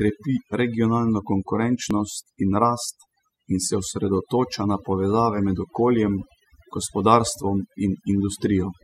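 Throughout the speech the background sinks to near silence with twinkling specks: overdone noise removal has pushed frequency bands near the noise estimate, and quiet voice detail, far down. At 1.91 s, just before "in rast", a tiny skip marks an overlap between stream segments, where about 12 ms was trimmed and the waveform jumps, consistent with a 2-second segment boundary.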